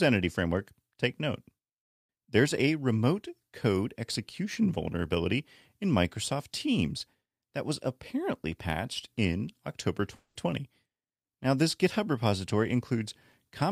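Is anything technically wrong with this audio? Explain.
Yes, there is a long network dropout in this speech clip from about 10.15 to 10.37 s, likely caused by audio packets failing to arrive. For about 200 ms the receiver stretches the last sound into a fading buzz. Unlike a brief glitch, the speech then resumes further on, with that stretch lost.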